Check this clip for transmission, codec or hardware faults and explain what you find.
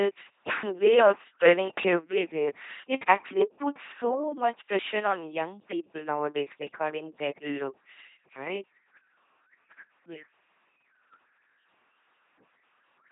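The speech carries one fault, an LPC-10 vocoder, present from start to finish. Heavy codec damage is audible. The codec models the throat as a simple filter of about ten poles, excited by either a pulse train or noise. Each instant is forced to be fully voiced or fully unvoiced. The result is a buzzing, mechanical robot voice, with hiss where voicing was misjudged. Nothing sounds above 3.8 kHz, which fits the 8 kHz sampling of this 2.4 kbit/s codec.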